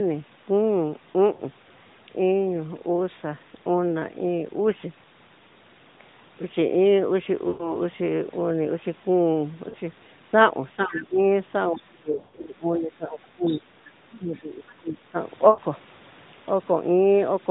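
Mobile-call speech with lost AMR speech frames at 1.34–1.42 s, 7.48–7.78 s, 9.70–9.76 s, 12.12–12.46 s (scattered, longest run 80 ms) and 15.50–15.60 s. The decoder stretches the last good frame with falling gain, so each spot sounds smeared and fading. On a spectrogram, harmonics freeze and dim before speech returns. The narrowband band stops at 4 kHz throughout. Speech suppressed in double talk dips the voice by about 15 dB at 10.76–11.18 s and about 20 dB at 14.14–15.16 s, likely because the echo canceller ducked both talkers. The waveform envelope visibly sags there. The other side's voice leaking through appears at 10.96 s, 11.75–11.83 s, 13.48–13.59 s and 14.13–14.18 s, about 15 to 30 dB below the speech. It is faint and likely residual loudspeaker echo. On a spectrogram it shows as weak, unrelated harmonic fragments.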